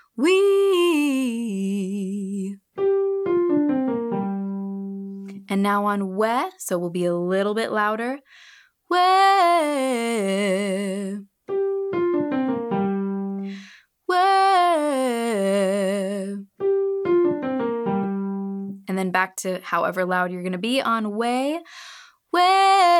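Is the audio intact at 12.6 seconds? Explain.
Yes, the audio is intact at 12.6 seconds, with no dropout, glitch or other fault at that point.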